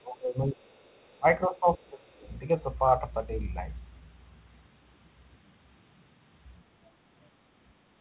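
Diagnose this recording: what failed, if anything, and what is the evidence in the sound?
Speech suppressed in double talk, at the call-processing stage. Level drops by roughly 20 to 25 dB at 0–0.68, 1.04–1.26 and 1.47–2.26 s. The likely cause is echo cancellation ducking overlapping talk.

Other side's voice leaking through, also in call processing. A very faint second voice appears at 0.78–1.18 and 2.2–2.3 s. This is likely residual loudspeaker echo.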